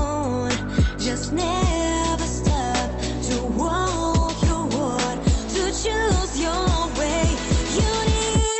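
Nothing is technically wrong with this audio; it comes through a call path with its ordinary Opus coding at about 24 kbps, with no faults to report.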